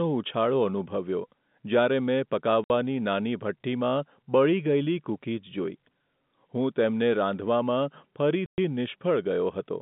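Packet loss filled with silence: at 2.64 s, just before "નાની ભઠ્ઠીમાં બળી", 60 ms goes missing, and at 8.46 s a 120 ms hole follows. The receiver plays silence for the lost packets, so the speech drops out abruptly with hard edges. Both gaps fit 30 ms packets, heard over narrowband telephone coding.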